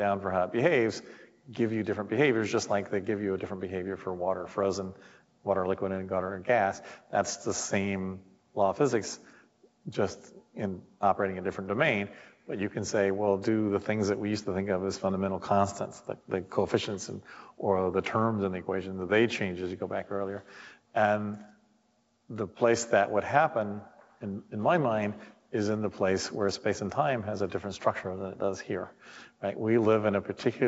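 There are no technical faults to describe in time order; the audio comes through an ordinary call path, with nothing above 8 kHz, as a wideband call codec would leave it.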